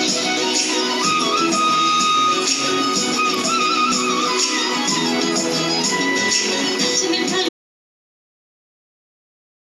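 An audio dropout to silence begins at 7.49 s and lasts to the end: the sound cuts off abruptly into silence with no room tone, likely from a lost input.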